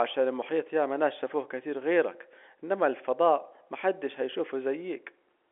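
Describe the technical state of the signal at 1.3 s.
At 1.3 s the speech is intact with no fault, carried through ordinary G.711 telephone coding, so it sounds like a phone line with nothing above about 3.7 kHz.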